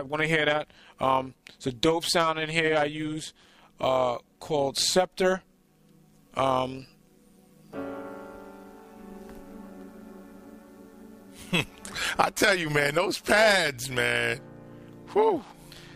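Overlap-add ripple runs throughout: the audio was split into windowed frames and rejoined with an overlap whose gain does not sum evenly. The level therefore swells and dips by about 6 dB around 150 times a second, producing a metallic buzz with extra tones around each note.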